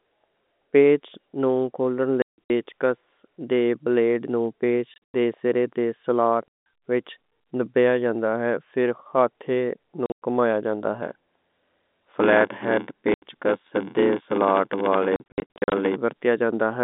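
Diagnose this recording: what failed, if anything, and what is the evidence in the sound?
Network stage: packet loss filled with silence. Hard-edged holes cut the sound at 2.22 to 2.5 s, 4.94 to 5.14 s just before "دے سرے دے", 6.48 to 6.66 s before "وچ نپایا", 10.06 to 10.2 s before "گھمیا جاندا", 13.14 to 13.22 s, and 15.16 to 15.72 s. The gaps run from 80 to 340 ms, and the last burst is broken into short pieces. The gap lengths step in units that fit 20 ms packets. The receiver played zeros where those packets never arrived.

Buffer stage: block size mismatch (padded). From 11.02 to 15.97 s, a buzz at 86.1 Hz rides under the band-limited telephone sound. The audio also slows to 0.861 of its normal speed, while the timbre holds. One stage delivers short blocks into a larger read, which fits a 512-sample buffer. The remainder of each block is padded with zeros. That gap repeats at the block rate, which produces the buzz and stretches the timing.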